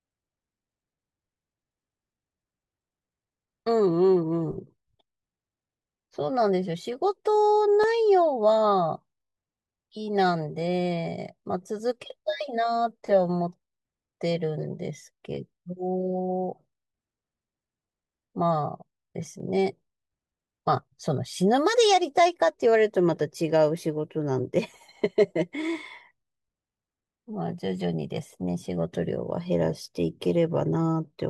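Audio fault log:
7.84 s and 19.40 s: block of digital silence. The speech drops to silence for 1.33 ms, then returns. Both edges are abrupt, with no fade, so each gap sounds like a brief tick. The length fits one unfilled 64-sample output buffer.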